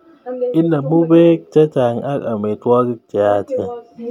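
No technical faults can be heard in this speech recording. Nothing in the sound points to a problem anywhere along the recording or playback chain.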